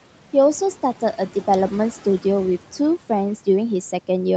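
From start to finish the speech carries noise suppressor artifacts. The suppressor judges, frame by frame, which frequency bands hold steady background noise and pulls them down, here by about 12 dB. The room noise, roughly 20 dB under the speech, therefore drops away in the gaps between words and comes back beneath them, so the background pumps in step with the talking. Above 8 kHz the spectrum is empty, consistent with the call path's bandwidth.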